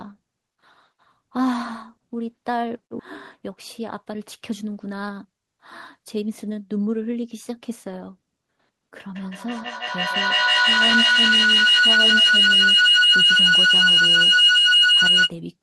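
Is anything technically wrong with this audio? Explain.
Yes. There are three kinds of fault in this speech clip.

Skip ahead, from 2.99 to 3.01 s. Playback jumps forward with no filler. About a second of speech is missing. The audio was dropped in transit or discarded by an overflowing jitter buffer while later audio was already waiting. The two sides of the jump are butted almost directly together. You hear an abrupt cut, and the speech resumes mid-flow.

Jitter buffer speed-up, from 3.40 to 5.54 s and again from 5.99 to 7.35 s. The buffer was holding more audio than its target. To shrink the delay, the receiver cut out short pitch-period pieces, many times in a row. Playback runs at 110% speed. About a fifth of a second goes in the first stretch, and a bit less in the second. The pitch stays put, but the talker sounds rushed.

Feedback howl, from 9.16 to 15.39 s. Two devices in the same room share the call. 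Sound leaves one loudspeaker, enters the other microphone and returns louder each trip. Instead of fading, the repeats narrow to a tone around 3 kHz. The loop's delay is roughly 150 ms. It builds to about 10 dB above the speech and persists until the loop is broken.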